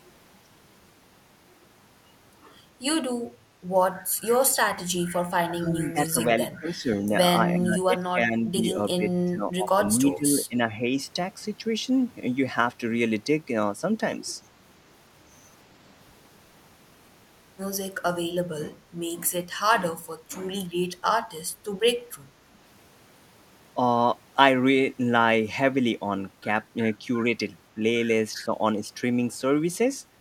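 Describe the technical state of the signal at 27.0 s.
At 27.0 s the speech signal is intact, with no audible technical fault at that point.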